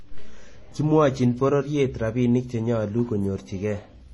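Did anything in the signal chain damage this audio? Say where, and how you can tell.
Yes, at the codec stage, across the whole speech clip. There is nothing above about 11.8 kHz, and two kinds of artefact are heard at once: those of a low-rate MP3 layered under those of HE-AAC. This is likely transcoding between lossy codecs, with a low-bitrate MP3 re-encoded to HE-AAC at a similar low rate. The second encoder wasted bits reproducing the first one's damage. On a spectrogram the band stops flat at 11.8 kHz, with blotchy, quantised patches beneath.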